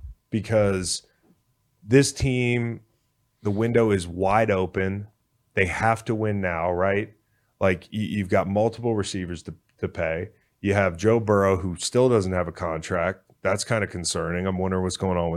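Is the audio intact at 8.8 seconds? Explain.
No. From 8.44 to 8.92 s, between "you have got" and "receivers to to pay", CD scratch ticks occur: a surface flaw defeats the disc's error correction on each turn, so the player patches over the lost samples, leaving four brief ticks, the longest about 1.5 ms.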